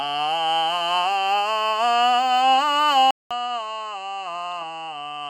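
At 3.11 s the recording input was likely switched to a poorer device. The music cuts out for 200 ms, then returns to the end noticeably quieter, dulled with nothing above 9.8 kHz, and carrying a faint new background noise well beneath it.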